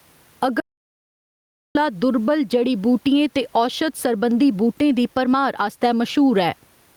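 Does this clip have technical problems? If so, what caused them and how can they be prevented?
Yes. Gain pumping runs through the whole clip: the level ducks by around 10 dB under each loud syllable, likely from excessive input gain with a fast limiter clamping down. Prevent it by lowering the microphone gain and easing the limiter's attack and release.

An audio dropout to silence runs from 0.60 to 1.75 s, erasing about 1.15 s of speech into digital silence with no room tone, likely a briefly lost input while recording continued. Prevent it by securing cables and connections and monitoring input meters during recording.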